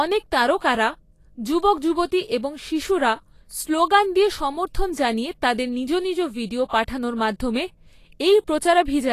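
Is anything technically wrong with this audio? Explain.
Yes. The speech carries plainly audible coding damage throughout, and one attack shows a brief pre-echo.

Vorbis compression, likely the cause, runs across the whole clip. Nothing is present above 14.2 kHz, and the remaining treble is grainy and hissy, with tonal detail roughened. At a low bitrate the codec keeps a smooth spectral outline but quantises the fine high-frequency content so coarsely that it becomes noise of similar energy. The degree of damage fits a rate around 35 kbps.

Pre-echo occurs from 6.68 to 6.73 s, after "তাদের নিজ নিজ ভিডিও" and before "পাঠানোর মাধ্যমে". A short hiss leads the attack by about 50 ms, and the onset itself sounds softened. The transform block containing the attack sized its quantisation noise for the loud portion, then spread that noise evenly across the block, including the quiet stretch just before the onset.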